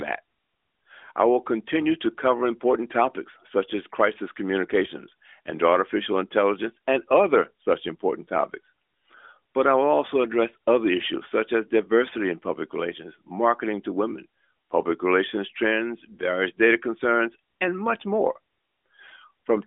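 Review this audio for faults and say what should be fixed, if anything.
Nothing here needs fixing: the speech carries the expected sound of a narrowband mobile call through the AMR narrowband mobile codec, with the band running from about 300 Hz to 3.6 kHz and a character that fits the codec's 12.2 kbps mode.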